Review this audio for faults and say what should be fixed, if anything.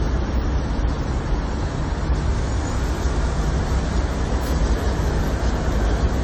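Throughout the clip the sound is swirly, smeared and hollow, with blurred attacks and more grit than a single 64 kbit/s AAC-LC pass should give. This is likely generation loss: around ten successive encodes, each quantising on a shifted frame grid, stacking noise and spectral holes. Keep a lossless master and encode to the lossy format only once, at the final delivery stage.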